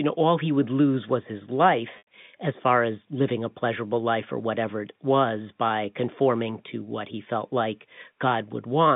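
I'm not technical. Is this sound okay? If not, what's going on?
No. At 1.98 to 2.07 s, after "would lose was his", there is packet loss with pitch repetition: 90 ms of audio went missing, and the receiver replayed the last sliver of voice to fill it, so you hear a brief buzzy hold before "as far as living".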